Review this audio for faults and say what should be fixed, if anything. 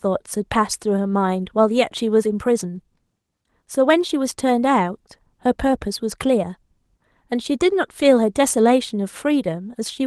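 Nothing to fix: the speech shows no faults, and its 20 kbps Opus voice compression, running in hybrid mode at full bandwidth, leaves only light coding traces that need no action.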